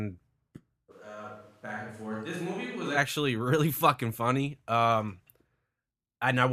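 A speech recording with a likely switch to a distant microphone from 0.93 to 2.96 s: the sound turns abruptly roomy and thin, drops about 10 dB, and gains room noise about 30 dB below the speech. Unlike a gradual level dip, the change is sudden at both ends.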